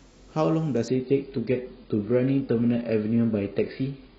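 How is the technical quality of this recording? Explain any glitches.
The quality drops sharply early on. From 0.88 s to the end, an adaptive stream at a lower bitrate takes over. When the connection slows, the player switches to a leaner encoding. The speech suddenly loses everything above 5.1 kHz and gains swirly, watery codec artefacts, which fits a fall from about 96 to 16 kbit/s AAC. Unlike packet loss, there is no gap or stutter, just an instant step down in clarity.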